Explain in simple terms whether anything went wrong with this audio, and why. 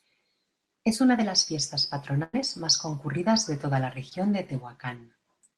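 Yes, two things went wrong, both from audio getting lost on its way across a call. From 2.23 to 2.35 s there is a burst of packet loss. About a tenth of a second never arrived. The receiver stretched out the last sound and faded it, so you hear a brief held buzz or hiss. Then the speech jumps ahead.

From 4.09 to 4.13 s there is a short concealed packet loss. About two hundredths of a second went missing. The receiver patched it by continuing the sound just before. This leaves a tiny smear or wobble in the speech.

Both gaps came through the call's Opus link, which keeps sound up to about 12 kHz.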